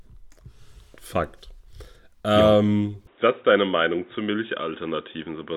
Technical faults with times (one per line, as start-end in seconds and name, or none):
3.07-5.56 input switched to a poorer device